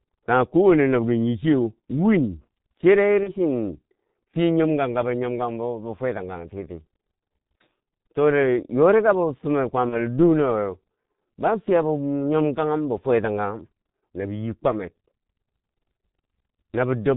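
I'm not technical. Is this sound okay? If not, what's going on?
No. The whole recording went through the G.723.1 codec, an old internet-phone format. It cuts the high sounds, so the voice is muffled, rough and blurry.

There are also two short glitches from VoIP packet loss concealed by the speech codec. At 3.23 s, after "nyi chiyeu win chere", and at 9.89 s, after "yori ka bo fumer", a small piece went missing. The phone system filled each gap with a brief guess, and the voice stays weak or distorted for a moment afterwards.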